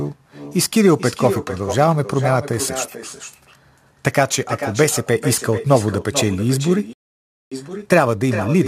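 Throughout the speech there is echo with no canceller: the far end's loudspeaker feeds its microphone, returning each phrase about 11 dB quieter and thinner, roughly 400 ms later. At 6.93 s a playback stall cuts the sound to silence for 0.58 s until 7.52 s, likely because the player ran out of buffered data or its thread was blocked. From 7.52 s to the end, time-compressed catch-up plays the backlog at 1.1 times speed by trimming and cross-fading small segments, so the speech sounds hurried at normal pitch.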